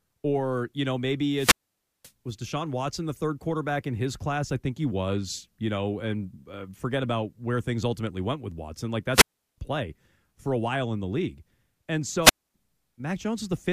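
Wireless microphone squelch dropouts cut the speech three times. The radio link fades, hiss rises, and the receiver mutes. At 1.35 s, after "or you know", silence lasts about 530 ms. At 9.12 s, before "play for a while", 360 ms. At 12.22 s, after "in the league and", 250 ms.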